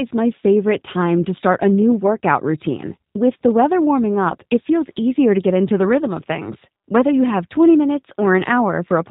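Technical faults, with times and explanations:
Throughout, G.729 codec: the speech is plainly rough and synthetic, with nothing above 4 kHz. This fits an 8 kbit/s VoIP coder rebuilding each 10 ms frame from a vocal tract filter, a pitch predictor and a few pulses. A simple low-pass would dull the sound without that buzzy texture.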